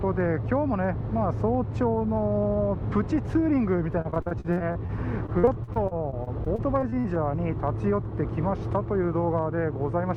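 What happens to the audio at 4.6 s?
At 4.6 s the sound sits inside a stretch of repeated packet loss (robotic sound), from 4.01 to 4.90 s. Packets keep going missing, each gap up to 40 ms. The last sound is stretched to cover them, so the audio turns choppy and robotic, with pieces missing.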